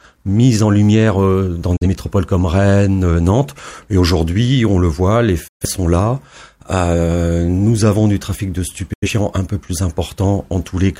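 Digital broadcast dropouts at 1.76–1.87, 5.48–5.67 and 8.93–9.09 s: the receiver lost valid frames and muted, fading out within 8 ms, and the audio resumes afterwards.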